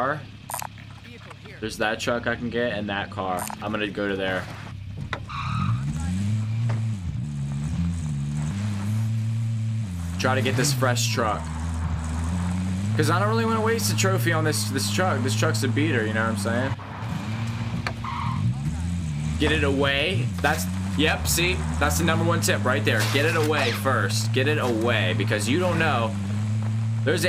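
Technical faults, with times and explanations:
5.83–6.10 s, CD scratch ticks: a surface blemish ruined more data than error correction could rebuild on consecutive disc turns, so the player patched those samples, giving three brief ticks, the longest about 1.5 ms, spaced at the disc's rotation rate.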